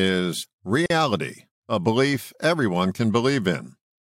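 This speech clip has a gap at a join of encoded pieces from 0.86 to 0.90 s: about 42 ms of silence where separately encoded segments meet, their encoder delay and final-frame padding left untrimmed. A waveform shows a flat dropout with smeared edges; a spectrogram shows a thin vertical blank band.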